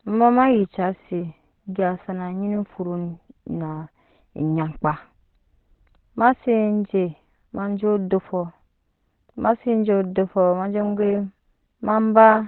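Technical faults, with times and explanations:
Throughout, Opus compression: nothing sounds above 4.2 kHz, and the speech is muffled and hoarse, likely from the encoder's narrowband speech mode at a rate fitting 12 kbps. Heavy roughness, not MP3's watery swirl or a clean low-pass's dullness, identifies it.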